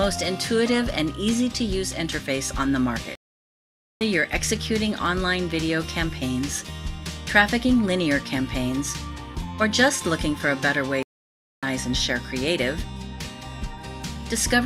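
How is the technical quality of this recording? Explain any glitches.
The recording has two clear glitches, both stream reconnects. At 3.15 to 4.04 s the audio drops out for about 0.86 s and resumes roughly 0.7 s further along; at 11.03 to 11.65 s a 0.6 s gap skips ahead about half a second. Each time the connection broke, the player went silent, reconnected and started a fresh decoder at the live position.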